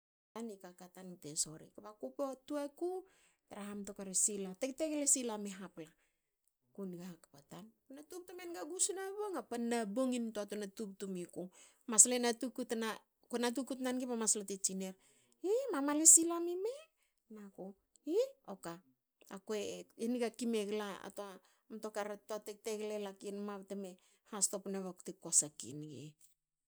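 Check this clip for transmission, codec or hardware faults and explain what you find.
There is one fault, a cut-off start. The clip holds digital silence from 0 to 0.36 s, and then the speech appears abruptly at 0.36 s, already mid-sound. Capture or streaming began late, so the opening of that sound was never recorded. There is no natural attack and no fade-in, only a hard step from nothing to full level. Unlike a dropout, the gap sits at the very start with no earlier audio, so nothing is interrupted; the sound simply begins already underway.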